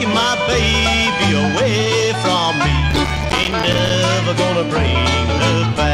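From 2.91 to 3.94 s a gritty crackle tears through the audio: processor overload crackle, where about forty short buffers missed their deadline and dropped out as silence.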